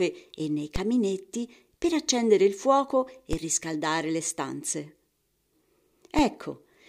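At 0.76 s, 3.33 s and 6.19 s the speech is hit by a DC step, a sudden jump in the waveform's zero line of about -16 dBFS (about -15 dBFS at the last one). Each offset then bleeds away through a 20 Hz high-pass, so it is heard as a low thump or click while the speech continues unchanged. On the waveform, the whole trace lurches off centre and drifts back. A spectrogram shows a brief broadband vertical stripe heaviest at the bottom.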